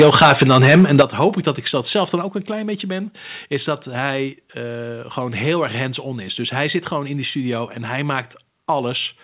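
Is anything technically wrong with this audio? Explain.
Yes. Microphone overload from 0.0 to 1.28 s, ending just before "ik dat ik zelf": the input gain was likely set too high, driving peaks about 14 dB past the converter's limit. Around 7 percent of samples have their tops cut flat, giving the loudest syllables a crackling, distorted edge.

Microphone volume stepped down at 1.02 s and at 2.22 s, the second between "dat ik zelf dan" and "ook een klein beetje". The call software likely reacted to the overload by cutting the device's input gain in single steps, by about 9 dB and then about 4 dB. Speech and background both drop in level abruptly at each point.

The audio passes through a narrowband call path with nothing above 4 kHz, which fits G.711 mu-law at 64 kbps.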